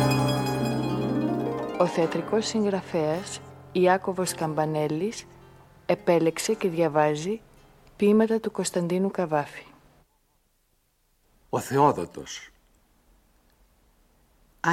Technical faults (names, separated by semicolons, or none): none